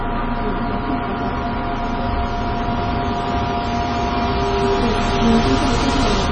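Throughout, heavy MP3 compression, likely at a low bitrate near 24 kbps, leaves nothing above 9.7 kHz and makes the sound watery and swirly. Its frame-to-frame flicker sets it apart from plain low-pass filtering.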